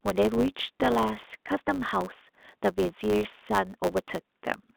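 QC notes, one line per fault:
Throughout: block size mismatch (truncated). Each 512-sample block loses its tail, giving a 100 Hz buzz and speech running about 1.07 times fast.
1.17 s and 3.24 s: packet loss with pitch repetition. Two 10 ms gaps were bridged by repeating the last pitch period, heard as brief held, buzzy moments.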